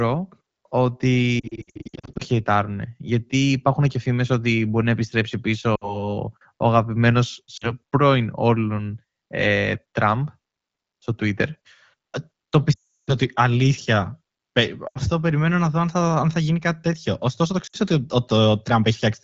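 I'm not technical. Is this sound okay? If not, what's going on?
No. The speech briefly stutters, warbles or dips at 1.4 to 2.2 s, 5.75 to 6.11 s, 7.57 to 7.72 s, 12.73 to 13.11 s, 14.87 to 14.99 s and 17.67 to 17.77 s. The roughest stretches are the first and 12.73 s. These are lost AMR speech frames. Radio errors spoiled small pieces of the call, so the phone covered each gap by briefly repeating the last good sound. The HD Voice codec carrying the call adds only light damage.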